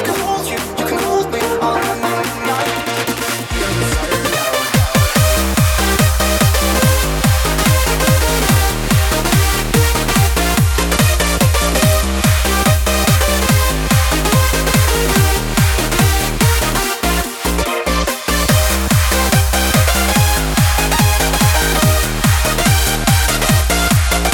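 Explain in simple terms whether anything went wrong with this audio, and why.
Bluetooth SBC bit pool drop, from 10.64 to 12.29 s and again from 22.64 s to the end: the wireless link got crowded, so the phone squeezed the sound into fewer bits. The highest frequencies lost out, leaving the treble dull and a gritty grain underneath.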